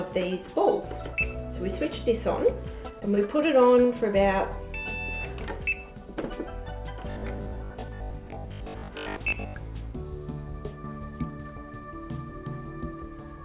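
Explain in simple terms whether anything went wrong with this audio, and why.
From 3.0 to 3.4 s the sound turns choppy. This is repeated packet loss: five short holes, the longest about 20 ms, were patched by stretching the preceding sound.

From 7.10 to 9.54 s the audio becomes a rigid, robotic buzz at 50 Hz. It is robotic sound from repeated short buffers, likely caused by roughly half the audio being replaced with repeats of a 20 ms chunk. The sound throughout is telephone-thin, with nothing above 4 kHz.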